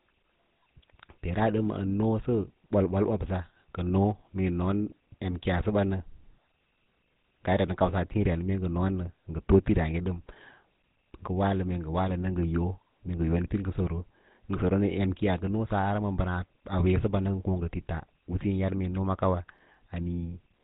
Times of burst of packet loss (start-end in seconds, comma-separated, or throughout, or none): none